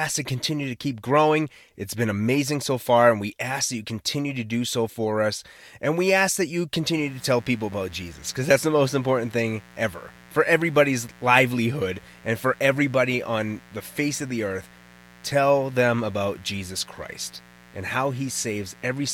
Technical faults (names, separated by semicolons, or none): mains buzz